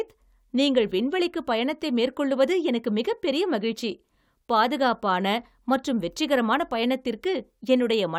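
No audible technical faults.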